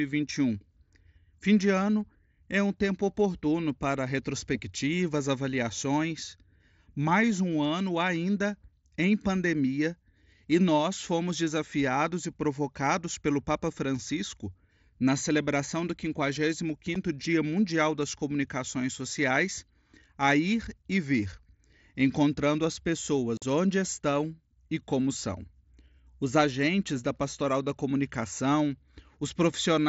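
Voice packets between headset and phone went missing with nothing filling the gap: unconcealed Bluetooth headset packet loss. At 16.95 s a tiny hole opens in the speech. From 23.37 to 23.42 s, between "encontrando as" and "onde estão e como", a 45 ms gap abruptly chops the speech.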